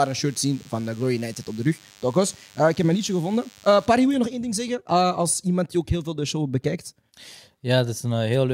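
From the start of the speech until about 3.87 s, a DECT cordless phone buzz sits under the sound. A nearby handset or base transmits a brief radio burst every 10 ms, and the audio circuitry rectifies it into a 100 Hz pulse train. It sounds thin and rasping, roughly 30 dB below the speech. Unlike mains hum, which is a rounder, smoother tone at 50 or 60 Hz, this buzz is full of sharp upper harmonics from the chopped bursts.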